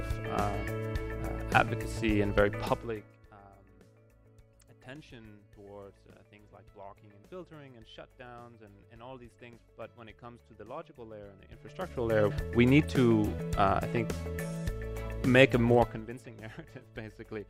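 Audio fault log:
11.35–12.25 s and 15.74–16.17 s, zipper noise: a fast ticking rides on the sound as the level rises about 25 dB, then falls about 20 dB, jumping in 1 dB and 2 dB steps roughly twenty times a second without smoothing, so each step clicks.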